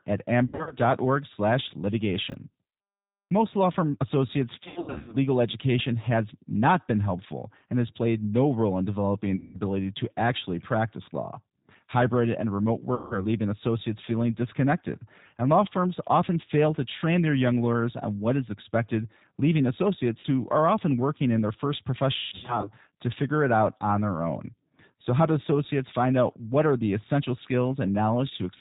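The whole recording passes through the G.729 codec, in its G.729A form at 8 kbit/s. The speech is rebuilt from a vocal tract filter, a pitch predictor and a few pulses per frame. Nothing above 4 kHz survives. The damage is plainly audible. Voices sound narrow, slightly rough and synthetic throughout.

VoIP packet loss concealed by the speech codec first appears from 0.47 to 0.75 s. About 160 ms is missing, scattered over 240 ms, with the longest gap 60 ms. The decoder fills each gap from its last pitch and filter, so the sound is stretched out and fades. It stays weak briefly after audio returns.

At 2.30 to 2.34 s there are chunks out of order. One 20 ms chunk plays one chunk late. Nothing is lost, but the sequence jumbles at the hard joins.

Concealed packet loss returns from 4.64 to 5.17 s. This is the heaviest event: about 360 ms lost across 480 ms, with runs up to 100 ms. The sound smears and decays. 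Shorter losses follow. From 9.36 to 9.59 s, about 180 ms goes, between "no role in developing" and "to actually practice law". From 12.95 to 13.19 s, about 160 ms goes, after "and remote", before "leaving associates feeling disconnected". At 20.20 to 20.26 s, about 40 ms drops after "what is expected leaving". Last, from 22.16 to 22.71 s, about 300 ms is lost over 480 ms, including a 160 ms run.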